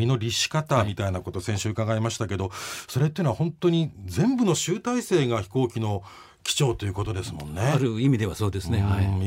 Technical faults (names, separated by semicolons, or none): none